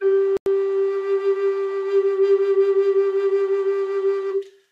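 A music clip with one Bluetooth stall. From 0.37 to 0.46 s the music cuts out completely. The silence lasts 93 ms, then playback returns. The likely cause is radio interference holding up packets, so the headphones' buffer ran empty until resent data arrived.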